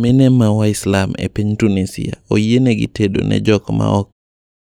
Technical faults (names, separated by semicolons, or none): none